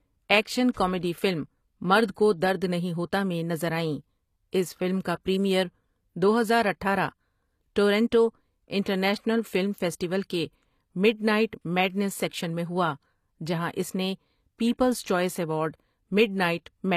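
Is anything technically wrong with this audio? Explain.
Yes. HE-AAC compression is the likely cause of damage heard throughout the speech: the upper spectrum is synthesised by copying lower bands upward rather than coded, so s sounds turn gritty and lispy, with nothing above 14.9 kHz, which fits a bitrate near 24 kbps.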